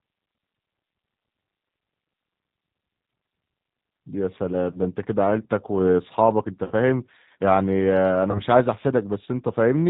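G.729 coding runs through the whole of this speech recording, audibly roughening and slightly synthesising the voice, with nothing above 4 kHz surviving the 8 kbit/s pulse-based reconstruction. VoIP packet loss concealed by the speech codec hits at 6.65–6.74 s and 8.31–8.40 s, where about 60 ms and 30 ms of audio were replaced by fading extrapolation that leaves the voice weak or distorted briefly afterwards.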